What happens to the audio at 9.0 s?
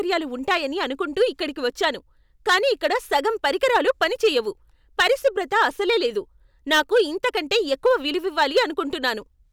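At 9.0 s the speech is hard clipped, as it is across the whole clip. The level runs about 7 dB hotter than the stage can pass, so the loudest peaks, roughly one percent of the samples, are sliced flat. Those squared-off tops add high harmonics, heard as brief crackle on the strongest syllables. Gentle saturation would round the peaks and sound warmer; here the breakup is abrupt and gritty, only on peaks.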